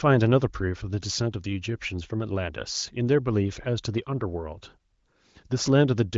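Nothing in this speech recording stood out as a technical problem on listening.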